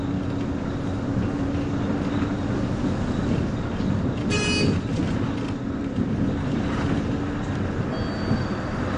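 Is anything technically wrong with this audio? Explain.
Yes. Throughout, the audio is dull and smeared, with nothing above 9.8 kHz and an audible warbling texture, likely AAC compression at a low bitrate, which fits roughly 32 kbps.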